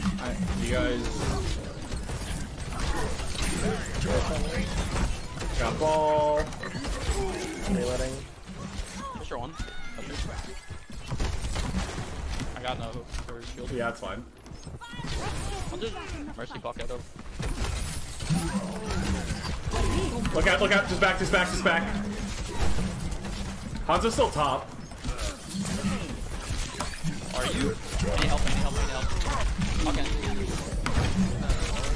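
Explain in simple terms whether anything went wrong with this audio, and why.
Nothing went wrong here; it's just a recording doing its job, with no glitches, dropouts or odd noises to point at anywhere along the way.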